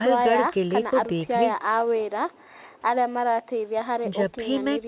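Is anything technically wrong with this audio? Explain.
No, nothing technically wrong.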